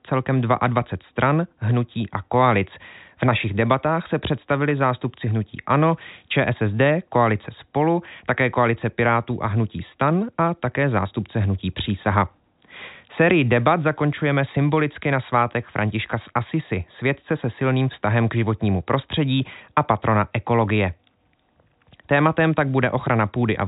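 No faults occur anywhere in this speech recording.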